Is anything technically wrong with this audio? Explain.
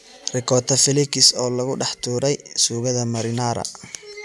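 No, nothing is technically wrong with this audio.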